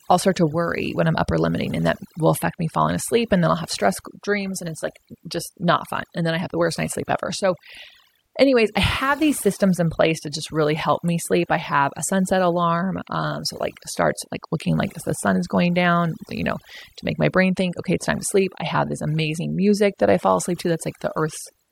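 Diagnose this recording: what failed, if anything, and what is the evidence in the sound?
Overdone noise removal in the call-processing stage, present throughout: suppression gates out bands near the noise estimate, leaving a lowered, twinkling background and removing quiet parts of the speech along with it.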